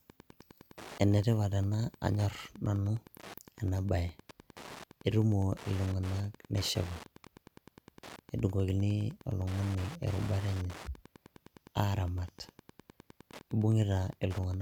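From start to finish the speech carries Wi-Fi interference: a steady ticking at about ten clicks per second, sitting roughly 20 dB below the voice. The tick interval is 102.4 ms, which matches a Wi-Fi access point's beacon period. A nearby radio's transmissions are being picked up and rectified by the audio circuitry, so each beacon burst turns into an audible click. The ticking is constant and runs underneath the speech.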